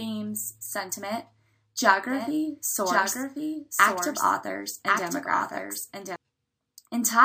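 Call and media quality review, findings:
Doubled audio track, 2.10 s to 6.16 s. Second full-band copy trails the original by about one second, roughly 5 dB quieter. No decay, no room colour. Starts and stops abruptly. Likely cause: a slower capture path recording the same signal again, or an edit holding two offset copies.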